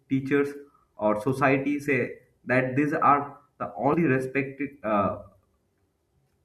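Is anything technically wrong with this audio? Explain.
Yes. Damaged data in a compressed stream appears twice, at 0.93 to 0.96 s and 3.90 to 3.94 s. Corrupted bytes make the decoder misread those frames and lose sync until it finds the next valid header, producing a brief chirp or squawk in the speech.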